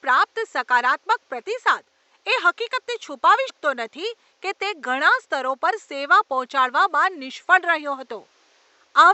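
At 3.49 to 3.51 s the speech jumps forward: compressed frames are skipped. A run of roughly five frames, about a tenth of a second of audio, never reaches the output, either missing from the stream or rejected by the decoder as damaged. The skip is a whole-frame multiple of 23.2 ms, which fits a 1024-sample frame at 44.1 kHz. The room noise sits about 44 dB below the speech.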